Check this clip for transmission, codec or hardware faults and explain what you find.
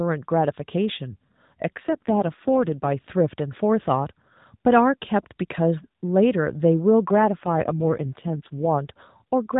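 Two AMR rate drops occur in this speech. They sit over a band-limited AMR narrowband path that cuts everything above 4 kHz.

AMR rate drop: from 1.78 to 2.90 s and from 7.08 to 8.69 s. The speech turns rougher and more synthetic, with a buzzy edge. The bandwidth stays the same and nothing drops out. This fits the link forcing the codec down from 12.2 to 5.9 kbps, leaving fewer bits to describe each frame.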